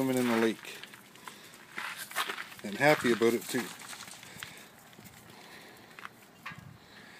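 No audible technical faults anywhere in this recording.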